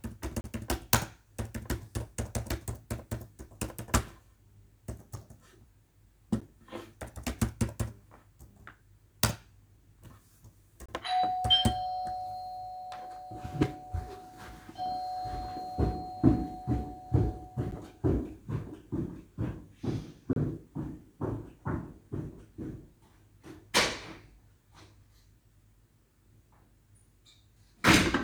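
Short holes break the sound at 0.41 to 0.44 s (30 ms), 6.41 s (10 ms), 10.86 to 10.89 s (about 27 ms), 17.71 s (10 ms) and 20.33 to 20.36 s (30 ms). The two 10 ms events register as ticks, the longer three as brief dropouts. Each is a block of digital silence: samples replaced by zeros, most likely because the output buffer wasn't filled in time, switching abruptly off and on without a fade.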